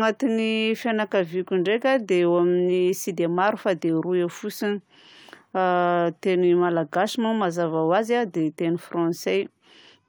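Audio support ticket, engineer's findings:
No audible faults found.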